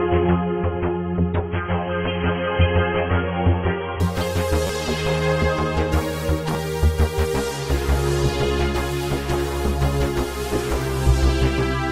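For the first 4 seconds the adaptive stream is starting at a low bitrate: nothing above about 3.3 kHz, smeary artefacts, then a sudden clean step up. At 4.67 to 4.69 s and again at 6.54 s there's a repeated buffer, a 10.67 ms chunk (which fits a 512-sample buffer) replayed as a quick buzzy stutter.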